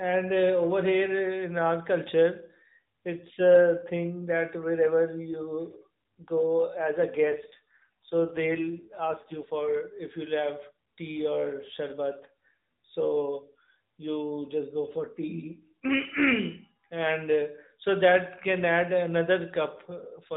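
An AMR rate drop from 7.18 to 9.55 s, after "go as a", cuts the codec's bitrate, leaving the speech rougher and more synthetic.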